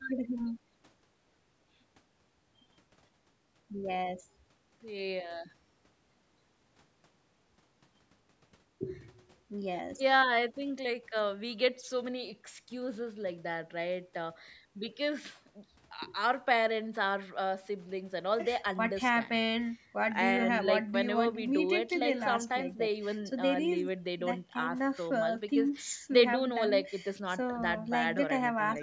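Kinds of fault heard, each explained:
No faults heard in the speech; the call microphone processing trims the lowest bass and leaves nothing above 8 kHz, both normal for that path.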